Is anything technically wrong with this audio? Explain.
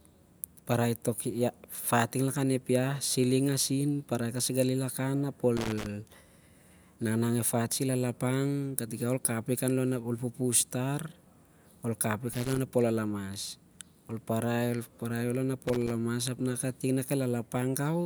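Yes, there's loose connector crackle in three short bursts, at 5.57 to 5.86 s, 12.33 to 12.59 s, and 15.67 to 15.92 s. A worn or dirty contact is cutting in and out as it shifts, chopping the speech, so each burst comes through as ragged scratchy crackle.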